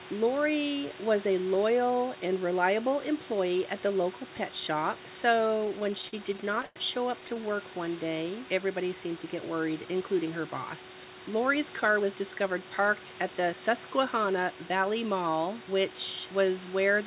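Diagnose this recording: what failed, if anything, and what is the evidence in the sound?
Repeated stalls (stutter) in the network jitter buffer, 5.48–6.79 s after "the local pet shop" and 7.21–7.46 s after "show up": late packets drag the audio, but unlike packet loss nothing is missing.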